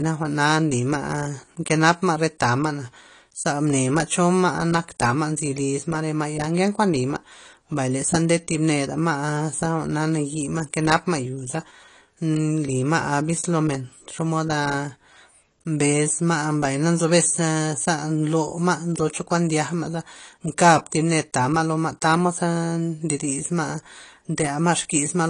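Speech throughout, with the entire clip likely passed through AAC compression (AAC-LC) at a low bitrate, which fits about 32 kbps. The encoder removes everything above 10.2 kHz and quantises the rest coarsely, so the speech sounds dull and smeared, with plainly audible coding damage.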